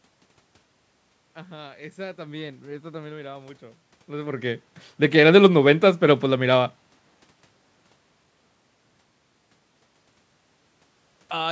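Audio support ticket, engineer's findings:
No technical faults found in this speech recording.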